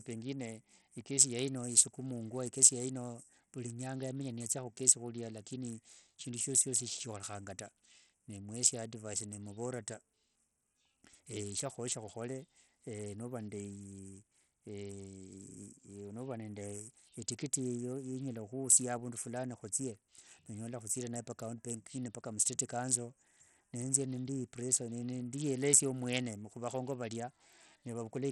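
It's a speech clip with a codec problem running the whole way through: the top end stops dead around 14.2 kHz, and what's left of the treble sounds thin and unsteady, with a gritty, grainy noise riding on the speech. That's the signature of Bluetooth SBC compression, likely at a starved bit pool. SBC splits the signal into a few wide bands and hands out bits without any real hearing model, so at a rate that sounds more like 64 kbps the upper bands get almost nothing and everything else is quantised coarsely.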